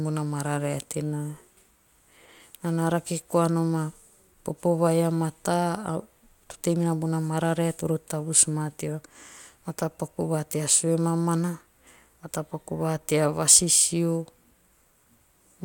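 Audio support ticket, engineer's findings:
No faults found in the speech recording. No audio-side action required.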